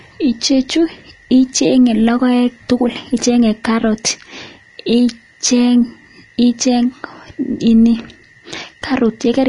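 Speech carrying plainly audible lossy-codec damage throughout: the treble sounds hissy and grainy, consonant onsets are smeared, and nothing remains above 10.6 kHz, which is likely Vorbis compression at a low setting around 34 kbps. A spectrogram shows a flat ceiling at 10.6 kHz with speckled, blotchy upper bands.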